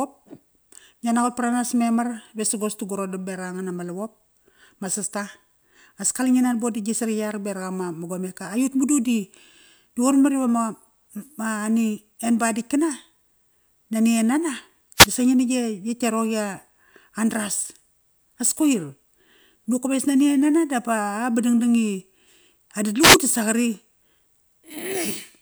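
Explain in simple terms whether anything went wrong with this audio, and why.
Two wireless microphone noise hits, brief static bursts at 14.96–15.08 s, just before "disa ngi na gia", and 23.00–23.18 s, where the radio signal faded and receiver noise broke through.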